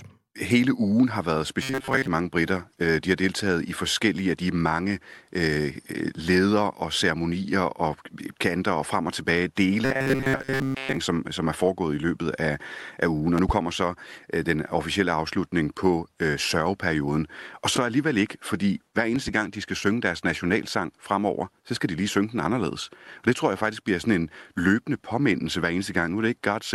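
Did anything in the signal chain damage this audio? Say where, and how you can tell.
Yes. Robotic sound from repeated short buffers, likely a driver or buffer underrun, occurs at 1.63–2.08 s and 9.85–10.98 s, between "og frem og tilbage" and "som som er foregået". Most of each stretch is replayed fragments, imposing a 134 Hz buzz, consistent with roughly 7.5 ms buffers. The spectrogram shows rigid horizontal harmonic lines at multiples of 134 Hz.

Loud pops, likely from the analogue wiring or a driver glitch, arrive as pairs at 13.38–13.52 s, just before "så øh den officielle", and at 19.16–19.31 s, between "alligevel ikke fordi hver" and "gang de skal synge". They peak around 10 dB and 5 dB above the signal. The waveform shows twin spikes, and the spectrogram shows full-band vertical streaks.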